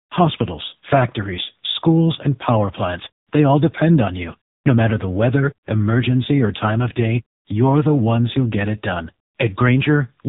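Speech heard through an AMR narrowband mobile codec for the whole clip: nothing survives above about 3.8 kHz, and the damage is heavy, giving the voice a buzzy, synthetic texture that points to a low AMR-NB rate near 6.7 kbps. What separates this from a plain low-pass filter or telephone band-limit is that texture. A filter only dulls the sound, while this codec rebuilds each 20 ms frame from a vocal-tract model and a few pulses, so the voice itself turns artificial.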